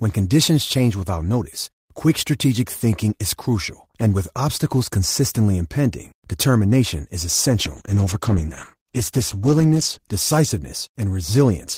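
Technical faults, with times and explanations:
7.57–10.13 s, call bitrate drop: the speech turns rough and watery, with the top end dulled, as the encoder falls from 32 to 13 kbps for about 2.5 s. Unlike packet loss, nothing drops out or stutters. The sound stays continuous but coarser until quality returns.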